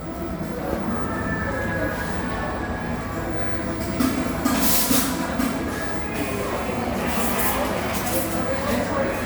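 No technical faults are audible in this recording of sounds.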